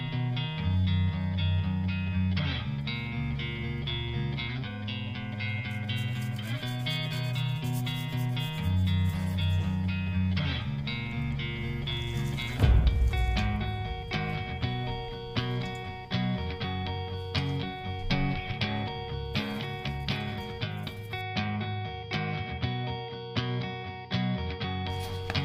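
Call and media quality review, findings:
No faults found. Nothing here calls for a ticket entry.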